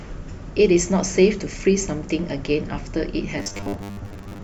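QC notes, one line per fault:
3.38–4.43 s, robotic sound from repeated short buffers: speech turns into a rigid 100 Hz buzz, likely from about half the audio being 10 ms repeats.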